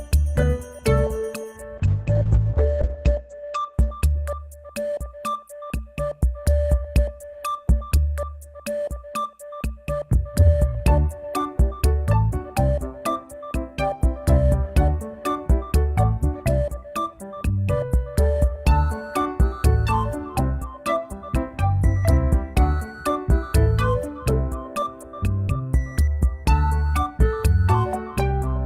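From 1.79 to 4.71 s the audio turns muffled and rough, losing everything above 8 kHz for a while. This is a call bitrate drop: the encoder was starved of bits, consistent with a fall from about 32 to 11 kbps, bottoming out for roughly 1.1 s before recovering.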